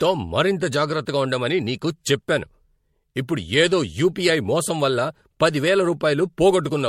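Speech runs throughout with generation loss: a swirly, hollow smear over the whole clip, with consonant attacks blurred and nothing above 16.4 kHz, a cut-off that fits MP3 at around 64 kbit/s. What separates it from a single low-bitrate encode is that the smearing and the spectral holes are worse than that bitrate alone would give, the likely cause being about four successive MP3 decode and re-encode passes, each re-quantising on a shifted frame grid so the damage stacks.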